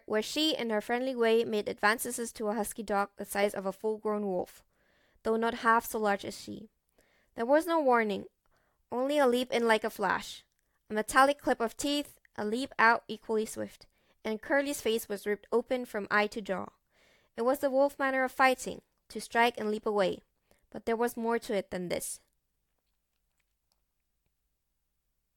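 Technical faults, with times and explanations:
No technical faults can be heard anywhere in this recording.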